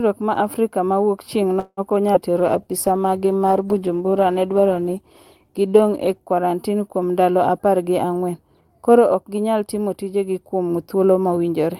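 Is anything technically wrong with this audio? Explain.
Yes, the speech has several call-transport faults.

Call audio freeze, 1.59 to 1.80 s: packets were likely held up and the jitter buffer ran dry. The receiver stretches the last sound into a fading buzz or hiss for about 180 ms, ending in roughly 30 ms of silence, and then the speech resumes where it stopped, with nothing lost.

Skip ahead, around 2.13 to 2.17 s: a stretch of audio, about a tenth of a second, is dropped while later audio was already queued. Playback jumps forward with only a tiny gap, so the two sides of the cut join almost directly and part of the speech is missing.

Jitter buffer slow-down, 2.32 to 3.39 s: to rebuild its reserve, the receiver repeats single pitch periods over and over, adding about 105 ms. The speech runs at about 91% speed at unchanged pitch, with drawn-out sounds.

Call bitrate drop, 2.39 to 6.31 s: the bandwidth estimate fell and the encoder was forced down, consistent with a fall from around 64 kbps to around 19 kbps, held at its lowest for about 3.7 s. 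Coarser coding, with the highs cut off, makes the speech rough, watery or muffled.

Jitter buffer speed-up, 7.58 to 9.11 s: the buffer held more audio than its target, so the receiver trimmed short pitch-period pieces repeatedly, removing about a fifth of a second in total. The speech runs at about 111% speed at the same pitch and sounds hurried.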